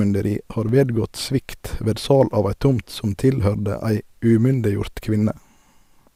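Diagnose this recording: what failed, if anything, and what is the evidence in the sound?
The failure is at the driver or buffer stage: an underrun with held sample at 0.69 s, just before "vedgått svikt ved sal". The output buffer ran dry. The converter froze on its last value for about 2.3 ms, so the waveform flattens. Around two milliseconds of live audio were lost.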